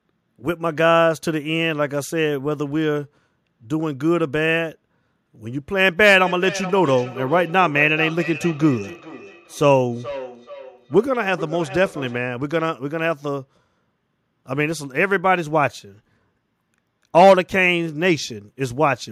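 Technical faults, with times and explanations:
6.26–12.35 s, feedback echo between two devices: a second device in the room plays back the call audio, the first device's microphone picks it up and sends it round again, and neither echo canceller removes it. The speech returns at a fixed interval of roughly 0.4 s, peaking about 14 dB below the direct speech.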